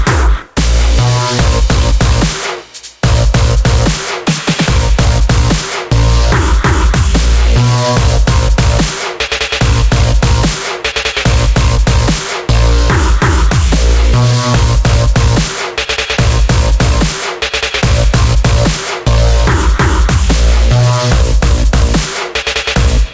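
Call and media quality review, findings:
No audible defects found; nothing to escalate.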